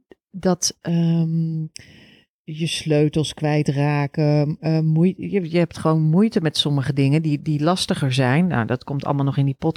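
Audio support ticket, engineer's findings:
Channel delay (comb filtering), 0.89 to 5.43 s: speech goes hollow and phasey. One channel is late by roughly 0.4 ms before the mono sum, so fixed notches start around 1.5 kHz and repeat evenly. Check the stereo path and summing stage.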